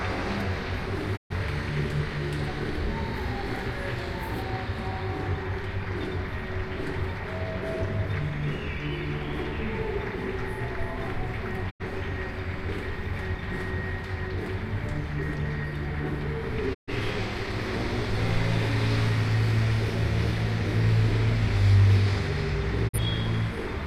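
The receiver repeatedly lost valid frames and muted, a digital broadcast dropout. The sound fades out over about 20 ms and vanishes at 1.15–1.35 s, 11.69–11.84 s, 16.73–16.92 s and 22.87–22.99 s. Each hole fits one to three lost frames, and that audio never returns.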